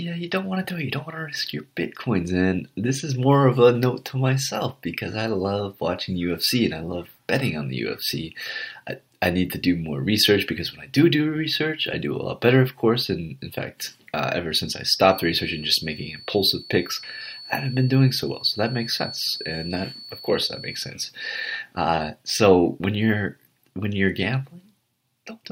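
A feedback whistle sits behind the audio from 15.01 to 20.97 s: a thin 4.4 kHz tone about 15 dB below the signal that swells and fades slowly without building into a howl, unlike a steady electrical tone, likely from a speaker-to-microphone loop right at feedback's edge.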